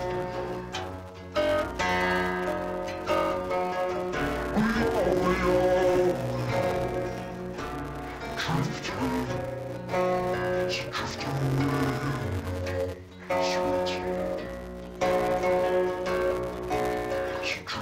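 From start to finish the sound is dull and robotic, with a steady buzz at about 188 Hz and no clear drop in pitch. This is interleaved audio read as planar. Each short block of alternating left and right samples, about 5.33 ms long, which fits a 256-sample block, has its first half taken as left and its second half as right. Both halves play at half speed, and the block edges repeat at that buzz rate.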